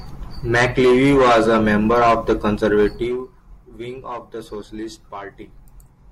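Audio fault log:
2.88 to 3.28 s, zipper noise: the gain falls by about 15 dB in unsmoothed steps of about 1 dB, around 30 a second, so each jump adds a tiny click to the speech and the fade comes across as a brief ticking zip.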